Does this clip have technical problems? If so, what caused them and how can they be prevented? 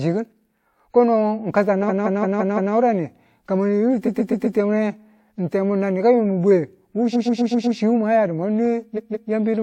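Yes. The speech has repeated frames in four places. At 1.88 to 2.73 s, a 171 ms block plays five extra times. At 4.05 to 4.56 s, a 128 ms block repeats four times. Just after "ni ka yungin bwe", at 7.12 to 7.76 s, a 128 ms block repeats five times. At 8.96 to 9.30 s, a 171 ms block repeats twice. Each is a stutter. A run of compressed frames was written or sent again, so the decoder replays it and the audio grows longer. Checking frame sequence numbers when writing or sending, and dropping duplicates, prevents it.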